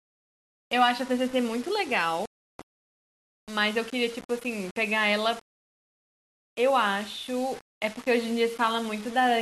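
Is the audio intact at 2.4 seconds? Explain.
No. A Bluetooth stall cuts the audio from 2.26 to 2.60 s. The sound drops to complete silence for about 0.34 s and then resumes. This is most likely a wireless link losing packets to interference. The headphones' small playback buffer empties, and nothing can be played until the retransmitted data arrives. The result is a clean gap rather than a glitch or a burst of noise, and then the speech carries on.

Across that moment, as through the whole clip, the speech is also coarse and grainy. A distortion rides along with the signal and roughens the quieter parts. The likely cause is low bit depth without dither. The audio sounds reduced to about 6 bits and rounded to the nearest level with no dither added. That puts the error only about 20 dB below the speech, and because the error tracks the waveform, it is heard as grit that changes with the sound.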